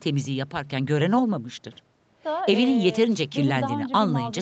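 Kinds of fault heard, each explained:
No faults heard; the speech is band-limited at 8 kHz, consistent with normal call processing and an Opus call path at 40 kbps.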